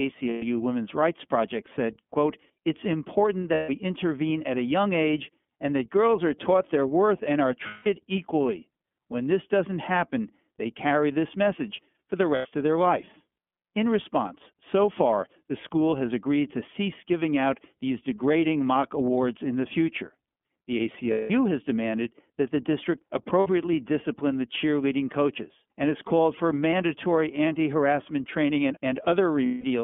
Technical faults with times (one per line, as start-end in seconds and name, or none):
0.00-29.84 iLBC codec
0.29-0.43 lost iLBC frames
3.54-3.70 lost iLBC frames
7.67-7.87 lost iLBC frames
12.35-12.46 lost iLBC frames
21.11-21.31 lost iLBC frames
23.40-23.47 lost iLBC frames
29.46-29.64 lost iLBC frames